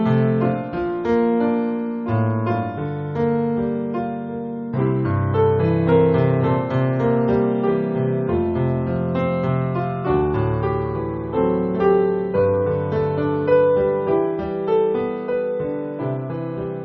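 No technical faults can be heard in this audio, so there are none to describe.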